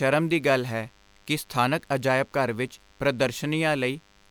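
A nearby DECT cordless phone or base station is transmitting short radio bursts every 10 ms, and something in the audio chain is rectifying that energy into the recording. The result is DECT cordless phone buzz running through the whole speech clip: a steady, thin, rasping buzz at 100 Hz with a dense stack of harmonics above it. It sits around 35 dB below the speech.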